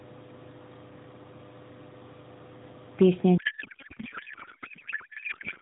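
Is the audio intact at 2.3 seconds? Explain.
Yes, the audio is intact at 2.3 s, with no fault to be heard at that moment.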